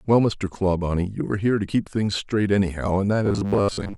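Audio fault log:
3.26–3.97 s, robotic sound from repeated short buffers: new audio was likely arriving too seldom, so the playback side kept looping the last fragment of about 10 ms to fill the gaps, with roughly half of this stretch made of repeats while real audio was skipped. Those fixed-length loops impose a steady 100 Hz buzz, turning the voice into a rigid, metallic drone that only loosely tracks the speech until the clip ends.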